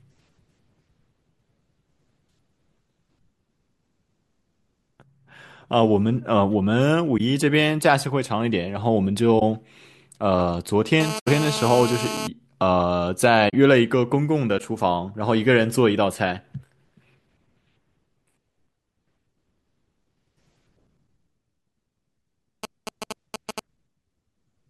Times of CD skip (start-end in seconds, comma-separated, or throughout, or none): none